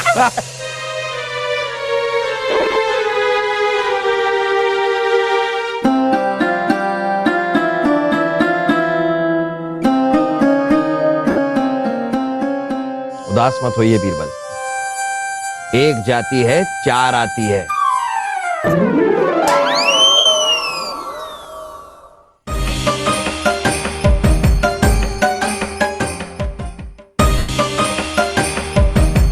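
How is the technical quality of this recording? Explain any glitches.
Four short dropouts from lost LE Audio frames, at 2.50–2.76 s, 11.30–11.38 s, 20.17–20.26 s and 27.38–27.49 s. At 2.5 s about 120 ms are missing in short scattered bursts of around 20 ms, which gives a brief fluttery roughness. At 11.3 s roughly 70 ms go in one block. The other two gaps last about 80 ms and 105 ms. The counts fit 7.5 ms frames. The LC3 decoder refills each gap by repeating the last good spectrum with randomised phase signs and fading it. Tonal content therefore becomes a hissy smear that sinks toward silence. On a spectrogram, harmonic lines turn into diffuse vertical noise patches, and the waveform shows a dip in level.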